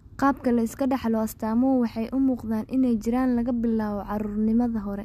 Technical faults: none

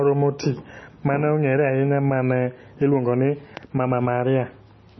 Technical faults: MP3 compression

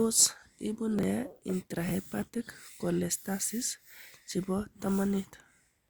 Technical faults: chunks out of order

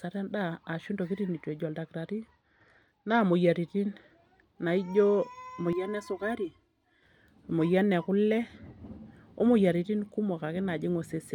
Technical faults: Bluetooth SBC bit pool drop; channel delay (comb filtering)

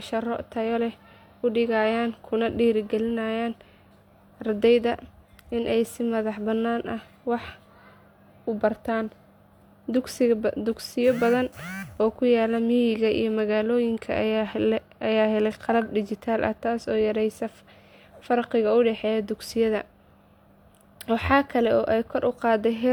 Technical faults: none

